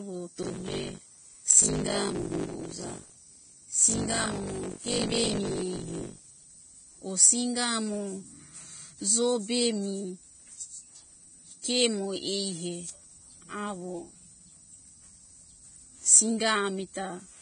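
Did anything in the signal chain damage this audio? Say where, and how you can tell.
Yes. The driver or buffer stage tore from 0.42 to 6.44 s: writer and hardware read pointer crossed inside each period, so roughly 40% of every buffer replayed speech about 70 ms old, hard-joined on both sides. That gives a steady 50 Hz robotic buzz riding on the speech.

The codec stage also left damage throughout. The top is gone above 9.7 kHz, and the remaining treble is hissy and grainy, with roughened tones and smeared consonant attacks. This is likely heavy Vorbis compression, consistent with a low bitrate around 24 kbps.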